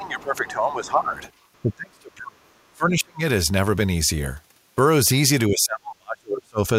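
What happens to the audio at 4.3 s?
Nothing goes wrong at 4.3 s; the speech plays through that moment intact, with no dropout, click or distortion.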